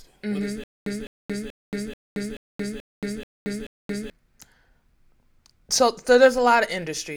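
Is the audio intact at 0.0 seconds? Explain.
Yes, the speech is intact at 0.0 seconds, with no fault audible at that moment.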